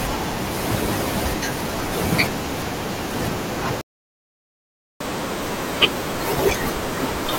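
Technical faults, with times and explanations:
3.81–5.01 s, playback stall: the speech halts for 1.19 s, leaving a flat, empty gap in the waveform, likely because the player ran out of data.
5.01–7.38 s, catch-up at higher speed: playback runs 1.25 times faster and pitch rises roughly four semitones to recover lost time. On the spectrogram, the harmonics shift upward and the syllables are compressed.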